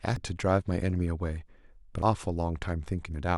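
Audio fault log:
0.16 s and 2.02 s: damaged data in a compressed stream. Each point brings a brief glitch in the speech, heard as a chirp, squawk, click or short hole, because the decoder hits corrupted bytes, misreads or discards those frames, loses sync and resumes at the next valid frame header.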